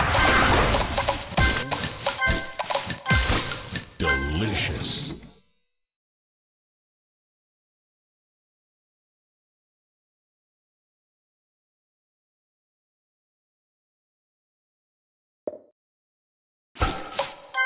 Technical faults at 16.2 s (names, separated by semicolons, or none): none